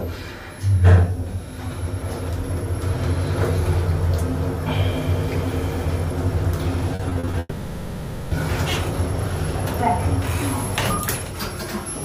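From 6.95 to 7.35 s there is repeated packet loss, giving a robotic sound. Short holes keep opening, the longest about 40 ms. Each is patched by stretching the last sound. About 40 percent of this stretch is patched, so it turns choppy.

At 7.39 s the sound becomes a fading buzz or hiss that carries on until 8.33 s. Nearly a second of audio is missing and replaced this way. Only a brief moment of silence is heard before the sound returns. A long network dropout is the likely cause.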